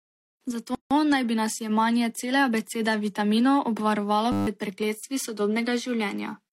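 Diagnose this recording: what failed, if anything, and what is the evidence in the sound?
Codec stage. A gap at a join of encoded pieces opens from 0.75 to 0.91 s. The speech breaks for about 159 ms, then resumes where it left off. The edges are smeared. Two separately encoded segments were spliced without trimming their padding and start delay.

Driver or buffer stage. A system hang loop runs from 4.32 to 4.47 s. One 10 ms slice repeats 15 times, giving a steady 100 Hz buzz. Around 150 ms of speech is lost. The system froze while the hardware kept replaying the same short ring buffer.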